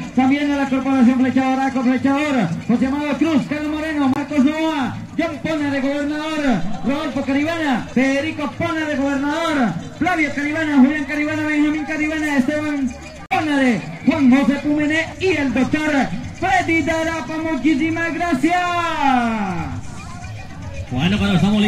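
At 4.14 s the sound cuts out until 4.17 s. A second gap runs from 13.26 to 13.32 s. Each is a short hole in otherwise continuous audio. The sound comes back further along, as though it kept playing through the silence. The likely cause is a Bluetooth dropout: packets reached the headphones too late and were discarded. The missing spans fit one lost frame of about 23 ms, then two frames of about 46 ms.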